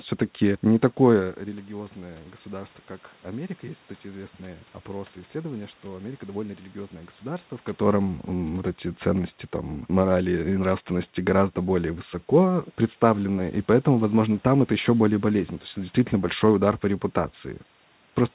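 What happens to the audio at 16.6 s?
Nothing goes wrong at 16.6 s; the speech plays through intact at that moment.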